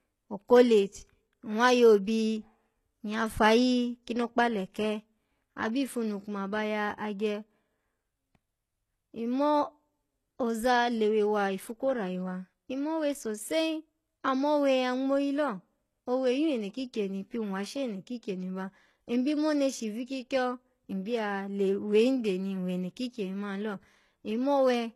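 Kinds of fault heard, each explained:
HE-AAC compression: the treble is present but sounds synthetic, likely from spectral band replication copying lower bands upward, with nothing above 12.3 kHz. Unlike a plain low-pass, brightness remains, yet sibilants sound gritty and the damage is plainly audible, fitting roughly 16 kbps.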